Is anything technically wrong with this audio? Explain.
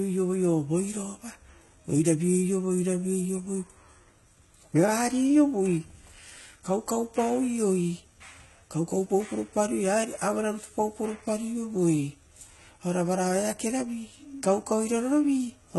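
Yes. Throughout the speech, the cause is likely heavy HE-AAC compression at a very low bitrate, around 16 kbps by the sound. The treble is rebuilt from copied lower bands instead of coded, so s sounds turn gritty and lispy, and nothing reaches above 11.8 kHz.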